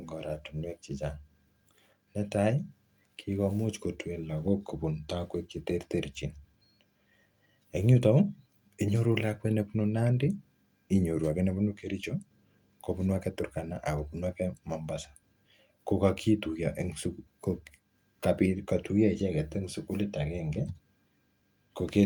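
No technical faults can be heard anywhere in the recording, and the signal holds steady throughout.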